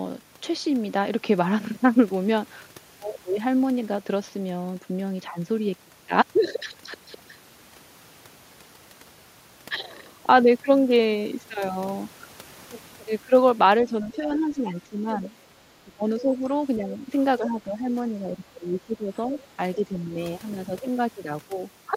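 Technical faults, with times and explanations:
13.84–15.21, 15.84–16.48, 16.77–17.10, 17.39–17.89, 18.09–19.13, 19.29–19.58 and 19.75–20.14 s: speech suppressed in double talk. The echo canceller likely mistook overlapping far-end talk for its own echo and attenuated everything, so the speech repeatedly sinks by about 5 to 15 dB in short, choppy dips.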